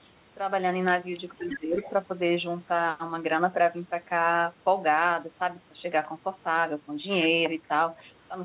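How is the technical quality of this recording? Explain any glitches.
The speech is affected by two short, overlapping call-audio glitches in the first three seconds, heard against the narrowband telephone sound of the call path, where nothing above 4 kHz comes through, which fits G.711 mu-law.

Other side's voice leaking through, at 1.39–1.58 s, 1.79–1.9 s, 2.07–2.14 s and 2.6–2.66 s. A second, fainter voice is audible under the main speech, likely because the talker's loudspeaker playing the far end reached the microphone and the echo canceller left a residue. The first scrap is strongest, roughly 10 dB below the speech, and the later ones fade away to very faint traces.

Speech suppressed in double talk, from 1.4 to 1.82 s. While that leaking voice overlaps the talker, the canceller likely cannot tell the two apart and turns the whole signal down. The main speech dips by up to about 10 dB over roughly 0.4 s, sounding briefly pulled back before returning to full level.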